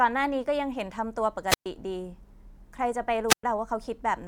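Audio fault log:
1.47–1.66 s and 3.28–3.43 s, wireless microphone squelch dropout: the analogue FM radio link weakens until the receiver's squelch shuts the output, so each event brings a brief rise of hiss, then a near-silent gap of about 0.12 s and 0.11 s respectively, before the speech returns.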